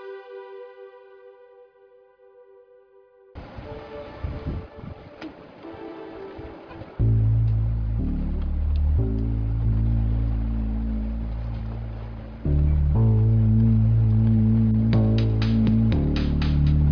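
No technical faults can be heard anywhere in this recording. Nothing along its timeline calls for comment.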